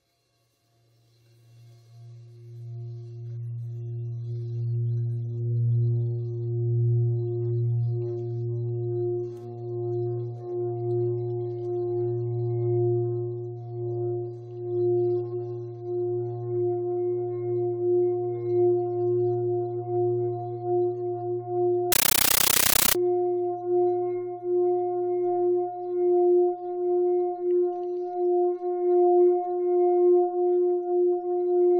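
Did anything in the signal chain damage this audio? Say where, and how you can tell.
Yes. From 21.92 to 22.95 s the sound gives way to harsh, very loud chattering static, a compressed stream played as audio at the playback link. An AC-3 bitstream passed over S/PDIF or HDMI was treated as PCM instead of decoded. On the waveform it shows as blocks of noise about 13.3 ms long, each followed by flat zero padding and repeating at 31.25 Hz, which fits a 640 kbps AC-3 stream. A spectrogram shows broadband vertical stripes at that rate.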